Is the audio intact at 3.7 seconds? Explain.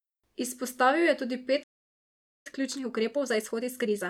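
No. At 3.7 s the speech is inside a time-compressed catch-up that begins at 2.47 s, just after "je tudi", and runs to the end. After a stall, the player trims its backlog by cutting out short pieces and cross-fading the gaps, so the speech plays about 1.25 times faster but keeps its pitch. On a spectrogram the harmonics stay at the same height while syllables squeeze closer.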